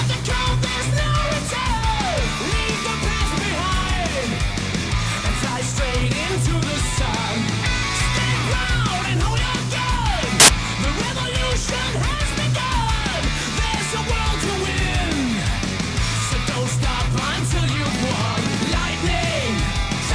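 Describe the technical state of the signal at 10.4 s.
At 10.40 s the player treats part of the file's tag block as audio: the embedded cover picture, which is compressed image data, gets decoded as if it were sample values. This is file tags played as audio. Because compressed bytes are close to random, they come out as very loud white noise, a harsh burst of static running to 10.48 s, roughly 85 ms, that switches on and off abruptly with hard edges.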